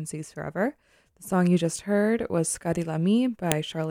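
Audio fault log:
3.52 s: file header played as audio. A single sharp, loud click cuts into the speech near the end of the clip. It marks the point where a second WAV segment was joined on without its header being stripped, so those few dozen bytes of format data were read as sample values. The result is a burst of near-random amplitudes lasting about a millisecond. It bears no relation to the surrounding signal, which is why it stands out as an abrupt snap rather than a distortion of the speech.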